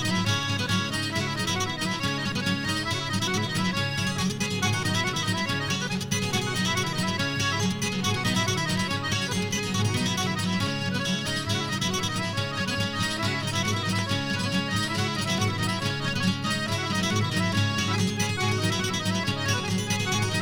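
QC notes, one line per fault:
No technical faults can be heard anywhere in the signal, with level, continuity and playback holding steady across the whole recording.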